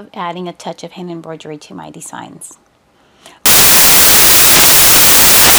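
At 3.46 s the audio turns into samples built from the wrong bytes, and it stays that way through to the end. The reader has put each sample's bytes together incorrectly, whether by slipping a byte, swapping their order or assuming the wrong alignment, so the rapidly changing low-order bits now carry the bulk of each value. The result is broadband noise in place of the sound. Clipping or added hiss would leave the original audible underneath; here the sound itself is scrambled from one sample to the next.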